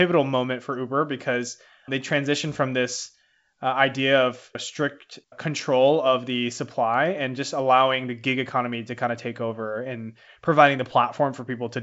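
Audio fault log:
No faults logged; the speech runs as G.722 wideband telephone coding at 64 kbit/s, with nothing present above about 7.7 kHz.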